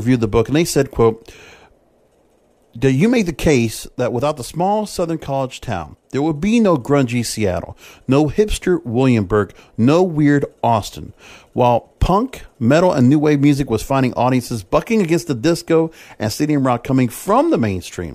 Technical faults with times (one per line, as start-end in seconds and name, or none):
3.70-6.31 sudden gain jump